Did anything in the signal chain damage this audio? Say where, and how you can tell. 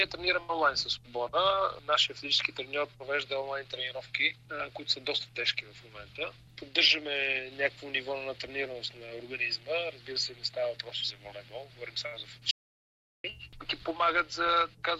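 Yes: an audio dropout to silence from 12.51 to 13.24 s, about 0.73 s lost. The sound cuts off mid-flow into silence, with no room tone. The likely cause is a lost input connection while recording continued.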